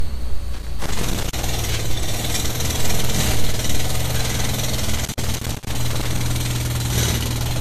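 Throughout, nothing sounds above 14.2 kHz, with smeared, swirly detail that a high-rate MP3 would not cause. This is likely low-bitrate audio saved at a high bitrate, with the damage coming from an earlier low-rate encode. From 0.54 to 1.43 s and again from 4.96 to 6.21 s, loose connector crackle breaks in as irregular scratchy bursts, unlike the evenly spaced clicks of digital dropouts.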